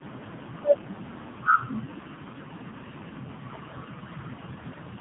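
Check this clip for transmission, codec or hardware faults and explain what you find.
Tandem speech coding runs through the whole clip. The speech appears to have been decoded and re-encoded across several telephone links in sequence, which fits about four separate speech codecs in a row ending in a low-rate mobile coder. Each stage compresses the previous stage's errors, so the damage accumulates. The result is rough, muffled, warbly speech with nothing above 3.8 kHz, duller and more smeared than a single narrowband link would produce.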